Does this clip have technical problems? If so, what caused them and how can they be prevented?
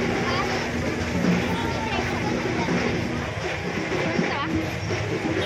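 Yes: mains hum from 0.0 to 3.25 s, a steady 60 Hz tone fairly close to the sound's level, coupled in through a ground loop or a nearby transformer. On a spectrogram it shows as a flat line at 60 Hz with some low harmonics. Balanced cables, a single ground point, and distance from power supplies prevent it.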